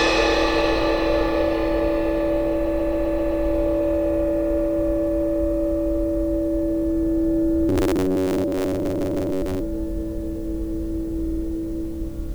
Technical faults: repeated frames; robotic sound from repeated short buffers

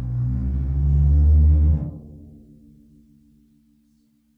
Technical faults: none

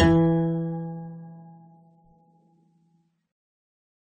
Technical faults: AAC compression

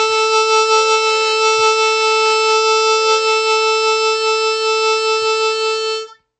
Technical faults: MP3 compression

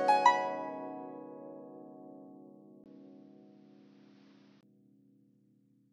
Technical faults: input switched to a poorer device

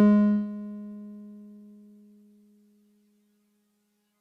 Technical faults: noise suppressor applied to music or sounds

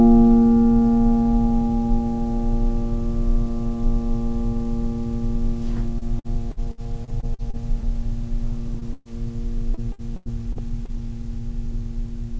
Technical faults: repeated packet loss (robotic sound); short concealed packet loss; burst of packet loss

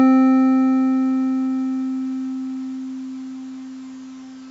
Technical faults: none

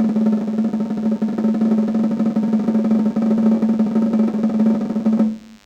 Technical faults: DECT cordless phone buzz

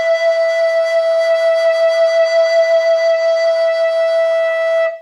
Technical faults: none

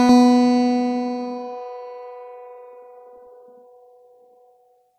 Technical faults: channel delay (doubling)

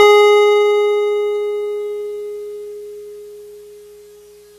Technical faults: Vorbis compression

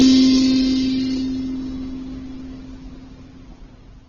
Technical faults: transcoding between lossy codecs

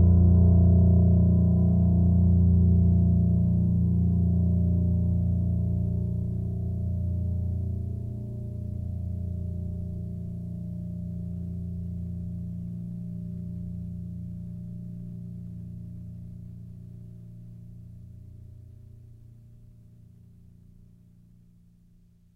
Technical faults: none

